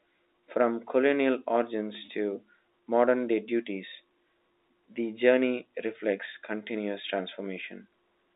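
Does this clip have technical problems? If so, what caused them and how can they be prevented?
Yes. Packet loss with pitch repetition occurs from 2.06 to 2.08 s, just after "colonial origins". About 20 ms of audio went missing, which fits a single lost packet, and the receiver filled the gap by repeating the last pitch period, giving a brief held, buzzy sound. Using a jitter buffer, a less congested network path, or forward error correction would prevent it.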